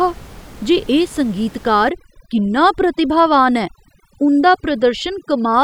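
From about 1.89 s to the end there's overdone noise removal: the reduction clamps bands near the room noise, so the background goes twinkly-silent and quiet parts of the speech are lost with it.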